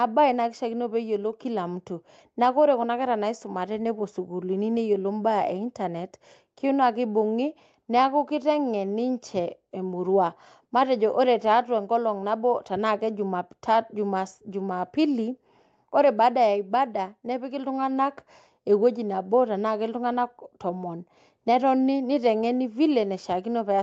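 No technical faults can be heard in this speech.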